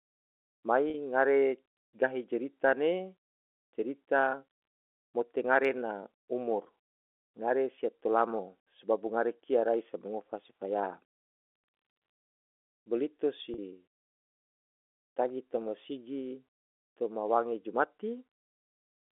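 At 0.9 s and again at 13.54 s, packet loss with pitch repetition bridges a 40 ms gap, consistent with two 20 ms packets, by repeating the last pitch period, giving a briefly held, buzzy tone.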